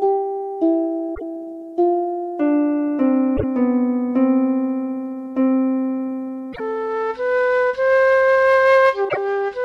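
Brief chirps or squawks break in at 1.11–1.22 s, 3.33–3.44 s, 6.49–6.60 s and 9.05–9.17 s, each about a tenth of a second. These are damaged data in a compressed stream, where corrupted frames lose the decoder's sync until it finds the next valid header.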